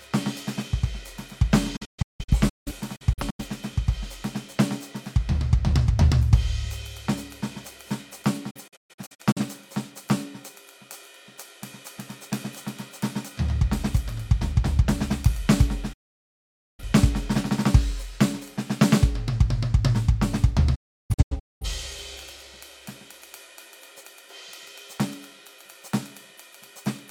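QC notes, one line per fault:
1.76–3.45 s, digital broadcast dropout: the music drops out in several short holes spread over about 1.6 s, about 0.73 s missing in total, the longest gap 0.17 s. The receiver mutes with an 8 ms fade each time frames fail to decode, so those passages are simply gone.
8.50–9.41 s, digital broadcast dropout: a shorter burst of mutes scattered across about 0.85 s, totalling 0.38 s of lost audio, longest hole 0.13 s. Each corrupted stretch is faded out within 8 ms and silenced until clean frames return, so the music stutters rather than glitches.
15.93–16.83 s, digital broadcast dropout: the longest loss, about 0.85 s of the music missing within this window. The receiver fades to silence in 8 ms while the incoming frames are unusable, then resumes further into the programme, so the music jumps ahead instead of continuing smoothly.
20.75–21.66 s, digital broadcast dropout: holes spread over about 0.85 s, with 0.68 s silenced in total, including one continuous gap of 0.34 s. 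The quick 8 ms fades mark where bad frames were muted, and the content sent during those gaps is not recovered.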